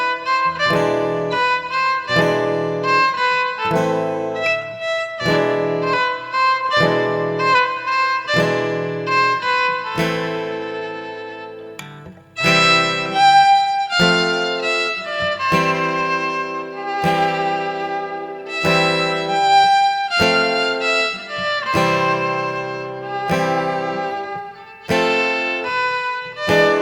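No technical faults can be heard anywhere in the clip.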